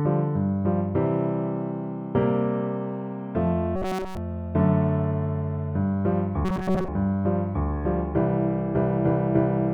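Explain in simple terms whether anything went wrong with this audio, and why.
Twice the sound turns into a stiff, metallic buzz, from 3.76 to 4.17 s and again from 6.45 to 6.89 s, humming at a fixed 188 Hz. This is robotic sound from repeated short buffers. Fresh audio was likely arriving too slowly, so the player kept looping the last sliver of sound, about 5 ms long, while the real audio was skipped. The first stretch is looped throughout; the second is mostly looped.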